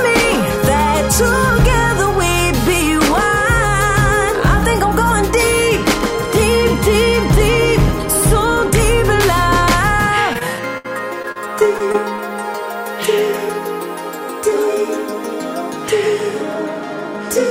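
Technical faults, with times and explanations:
10.33–10.86 s and 11.22–12.20 s: repeated packet loss (robotic sound). The audio breaks up in rapid holes, four then six, the longest 65 ms. Each hole is bridged by extending the preceding sound, so both stretches turn choppy.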